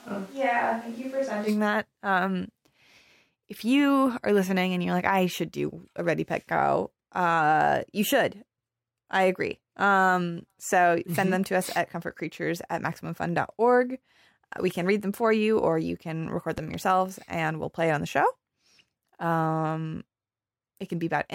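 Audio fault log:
0.00–1.47 s, switch to a distant microphone: the speech is already under way in this state when the clip begins. It sounds hollow and roomy, thinner in the bass, roughly 5 dB quieter, and carries a noticeable room noise floor about 25 dB below the speech. It most likely comes from the close microphone's feed being absent and a farther pickup standing in. Unlike added reverb or a simple level dip, the tone, distance and noise all change together and snap back abruptly at 1.47 s.
16.58–16.76 s, loud pop: just after "or you can record" and before "and we'll play it", two sharp pops land in quick succession, peaking about 10 dB above the surrounding sound. The likely cause is a voltage step or pulse entering the chain, such as a plug, switch or static discharge, with the downstream circuitry shaping each pulse into a thump. Unlike a dropout or edit click, the speech continues uninterrupted underneath, with nothing missing.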